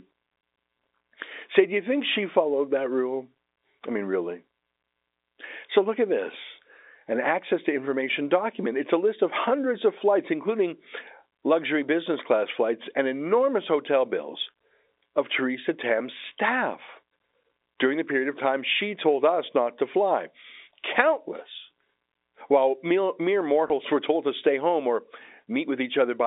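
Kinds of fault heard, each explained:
Packet loss with last packet repeated: At 23.68 s, just before "were told to stay", 20 ms of audio drops out, which fits one lost packet. The previous packet is replayed in its place. This single repeat sounds like a small blip.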